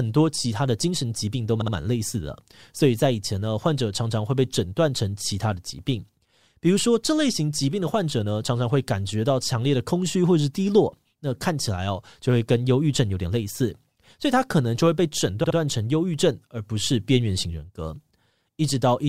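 Repeated frames at 1.62 s and 15.44 s: a 64 ms block of coded audio was replayed two extra times, so the speech stutters and stretches by 128 ms each time.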